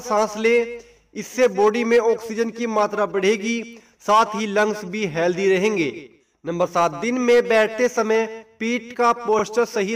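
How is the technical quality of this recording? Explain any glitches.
One glitch stands out: repeated frames at 9.39 to 9.42 s. A 32 ms block, which fits a single compressed frame, plays twice, giving a brief stutter and adding 32 ms. Unlike a dropout, no sound is lost; it is a short echo of the block just heard.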